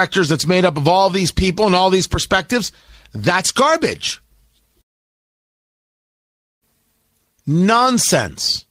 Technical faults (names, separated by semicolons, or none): long network dropout